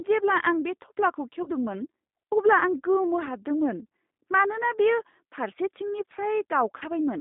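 G.729 codec, throughout: the sound is confined to a telephone band of about 200 Hz to 3.7 kHz and rebuilt from a vocal tract filter, a pitch predictor and a few pulses per frame. This points to the 8 kbit/s G.729A variant, and it gives the speech a plainly audible rough, synthetic edge.

VoIP packet loss concealed by the speech codec, at 1.43 to 1.50 s and again at 6.78 to 6.83 s: each time about 30 ms of audio is missing, which fits a single lost packet. The decoder bridges the gap by extending its last pitch and filter at falling gain, leaving a short stretched patch that fades. Because each frame builds on the one before, the speech stays weakened briefly after the gap.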